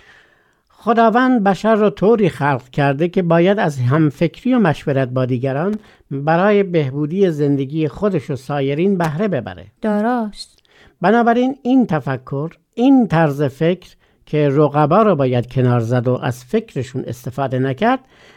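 Speech carrying two short, irregular bursts of scratchy crackle, from 5.73 to 5.95 s and 9.04 to 9.12 s: loose connector crackle, where a worn contact makes and breaks, chopping the signal.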